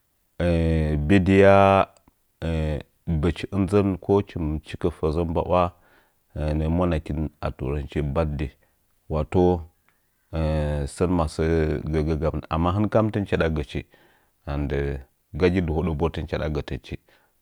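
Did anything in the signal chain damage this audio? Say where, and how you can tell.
No, nothing along the chain has left an audible mark on this speech recording, and the signal reaches the listener without any damage that can be heard.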